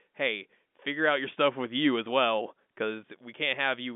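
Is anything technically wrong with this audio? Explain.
No, this is ordinary telephone-band speech, consistent with G.711 A-law coding at 64 kbps, with the line passing roughly 200 Hz to 3.6 kHz and nothing in it that amounts to a fault.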